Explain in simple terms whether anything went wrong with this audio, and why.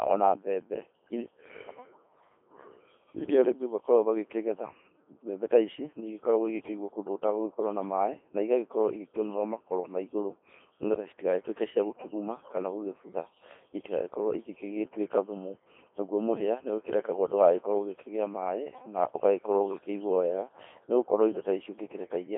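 The speech sounds robotic, buzzy and thin throughout. That's the Codec 2 vocoder, which rebuilds the voice from a few basic measurements instead of the real waveform.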